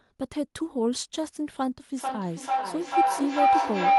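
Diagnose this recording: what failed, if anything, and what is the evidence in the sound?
Feedback howl from 1.97 s to the end of the clip, a failure in the call path where two devices in one room are joined in an acoustic loop. A tone near 700 Hz swells to about 7 dB above the speech and pulses roughly every 0.4 s, the loop's round-trip delay. Each pass from loudspeaker into microphone and back returns the sound louder, so the repeats grow instead of decaying and narrow onto the frequency the loop favours.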